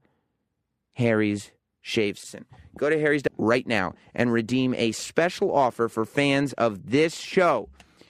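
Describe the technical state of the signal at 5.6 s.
At 5.6 s the speech signal is intact, with no fault present at that moment.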